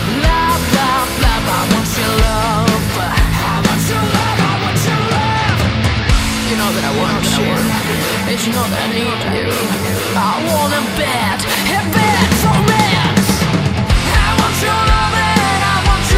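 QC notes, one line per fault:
Nothing stood out on listening.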